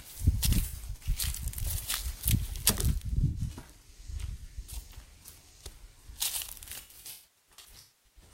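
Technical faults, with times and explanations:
0.67–1.02 s, 3.27–3.62 s and 6.81–8.21 s: AAC frame loss with concealment. Dropped frames are patched from the last good spectrum, giving smeared, noisy dropouts; the last and longest gap decays nearly to silence.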